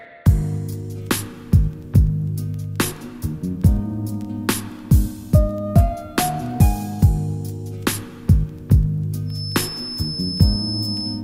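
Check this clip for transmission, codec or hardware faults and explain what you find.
One fault is present: a feedback whistle. From 9.24 s until the clip ends at 11.24 s, a thin, steady tone near 5.2 kHz sits behind the sound, roughly 10 dB below it, wavering slowly in level without growing. The likely cause is a loudspeaker-to-microphone loop held just at the edge of instability. Sound from the speaker re-enters the microphone with enough gain at that one frequency to keep ringing, but not enough to run away into a howl.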